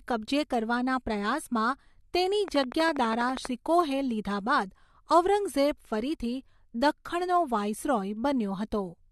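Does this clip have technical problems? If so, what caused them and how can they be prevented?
Yes, there's a train of clicks from 2.48 to 3.46 s, right after "કબજે કરવાના પ્રયાસમાં તેની". It's a regular ticking at about 12.3 clicks per second, something like fifteen near-identical pops, each peaking roughly 10 dB above the speech. That steady, same-shaped repetition most likely comes from electrical interference from nearby gear or a faulty connection or power supply. To prevent it, keep phones and power supplies away from the cabling and use a stable, properly powered interface.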